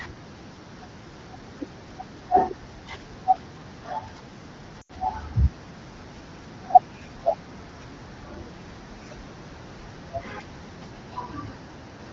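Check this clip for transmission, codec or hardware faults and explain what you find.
One transmission fault occurs: a short run of lost AMR speech frames from 4.81 to 4.92 s. Radio errors corrupted consecutive frames, so they failed their checksum and were discarded. The AMR-WB decoder, whose clear rendering of the speech points to a rate around 15.85 kbit/s, filled the gap by repeating the last good pitch and vocal tract settings at steadily falling gain. The affected speech drops to near silence within two frames of a gap of about 80 ms, which fits four 20 ms frames. It then returns briefly weak or rough.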